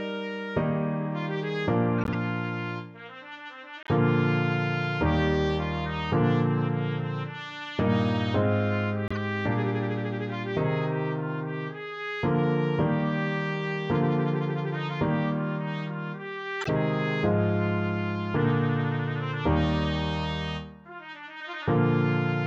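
Short chirps and noisy blips cut in at 1.98 to 2.15 s, 3.83 to 3.89 s, 9.08 to 9.17 s and 16.61 to 16.70 s, the second much fainter. Each is a corrupt frame decoded: damaged compressed frames were played anyway, misplacing energy across frequencies.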